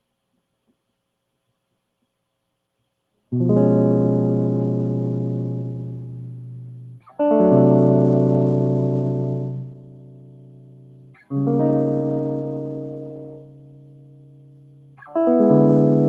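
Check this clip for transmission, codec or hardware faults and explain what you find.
The main problem here is a noise suppressor built for speech left running on a music track, and you can hear it working hard the whole way through. It treats sustained tones and room sound as noise, so levels swing by around 20 dB: attacks punch through, but held notes and reverb tails get pulled down, giving the music a pumping, fluttery, thinned-out feel. This rides on top of a call-codec path whose top end stops near 12 kHz, which fits a fairly low-bitrate Opus stream.

The sound cut by the noise suppressor shows up in three stretches: 5.99 to 7.19 s (dropping about 15 dB at worst), 9.5 to 11.34 s and 12.61 to 15.05 s (about 16 dB each). In these spots the suppressor decided the music itself was noise and clamped down harder than elsewhere. Sustained and decaying parts sink noticeably or get their tails chopped off, while sharper onsets mostly survive, so those passages sound hollow and gated.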